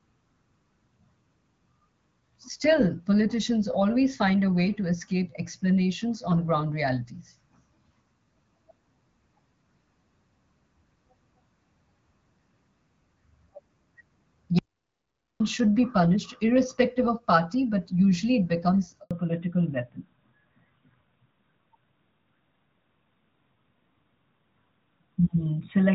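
At 14.59 s the speech cuts off abruptly into silence, with no room tone underneath, and it resumes at 15.40 s mid-flow on "should be punished irrespective". This is an audio dropout to silence lasting about 0.81 s. The input signal was likely lost, through a disconnected device, a broken link or an accidental mute, while recording carried on writing silence, so whatever was said in that stretch is simply gone.

Right after "but usually it becomes", at 19.03 s, the voice fades out within a few tens of milliseconds and stays silent until 19.11 s. That 80 ms hole is a handover gap. The call was being passed from one network to another, and no speech frames arrived while the switch took place, so that short slice of talk never reached the far end.

When the speech returns at 19.11 s it sounds duller and rougher, and it stays that way to the end of the clip. That is a fallback to narrowband. 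Before the handover the call ran as AMR-WB HD Voice at 12.65 kbit/s, whose light coding leaves the voice clear with its upper range intact. The new link uses AMR-NB at 12.2 kbit/s, which removes everything above 4 kHz. The sibilance and airiness of the earlier part disappear, leaving the thinner, boxier sound of an older phone call.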